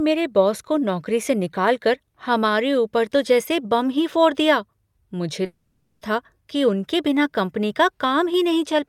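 A speech recording with one real problem: from about 5.45 to 6.03 s the audio cuts out and a smeared buzzy hiss stretches the last sound across the whole 0.56 s hole. That's most likely a long network dropout, and the missing stretch never comes back.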